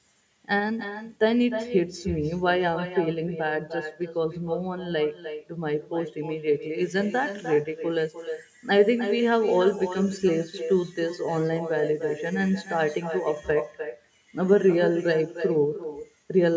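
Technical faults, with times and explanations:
Throughout, echo with no canceller: far-end loudspeaker sound reaches its microphone uncancelled, returning a thin copy about 10 dB down, roughly a third of a second late.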